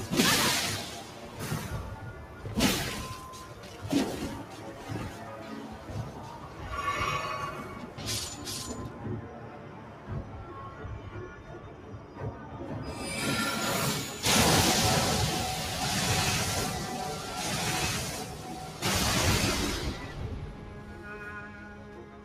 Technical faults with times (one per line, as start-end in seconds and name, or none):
0.00-22.25 noise suppressor applied to music or sounds
9.54-10.08 sound cut by the noise suppressor
11.73-12.17 sound cut by the noise suppressor
20.55-21.05 sound cut by the noise suppressor
21.54-22.25 sound cut by the noise suppressor